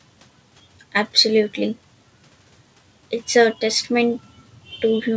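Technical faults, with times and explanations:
The speech comes through a wideband call path with nothing above 8 kHz, which fits G.722 coding, and the signal shows no technical faults.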